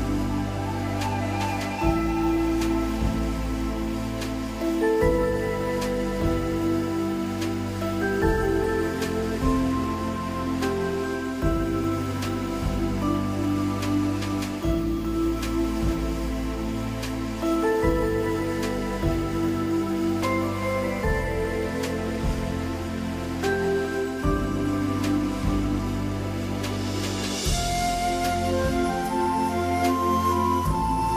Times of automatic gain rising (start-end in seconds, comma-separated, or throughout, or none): none